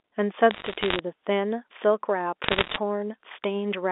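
From 0.51 to 0.99 s, then 2.44 to 2.78 s, you get bit errors on a digital phone line. Flipped bits spoil single samples, so there's ticky crackle, thicker in the second burst.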